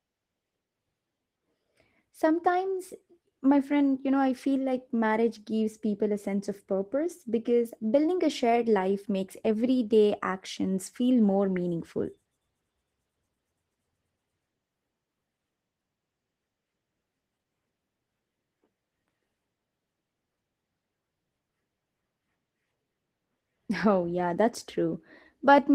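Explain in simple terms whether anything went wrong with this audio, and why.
Yes. From start to finish the speech sounds rough, hoarse and a little robotic. That is Opus voice compression squeezing the audio hard: the voice's core is rebuilt from a simplified model, and the higher frequencies are coded only coarsely on top.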